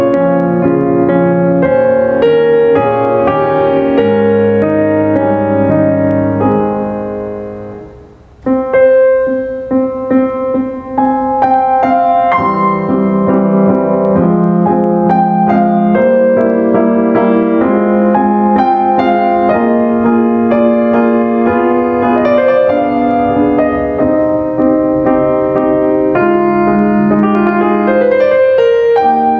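Throughout the music, the input gain is likely set far too high, so a fast limiter clamps down on every loud passage. That is gain pumping: the gain swings by around 10 dB under each peak, squashing the dynamics, while the call's band-limited processing tops out near 8 kHz.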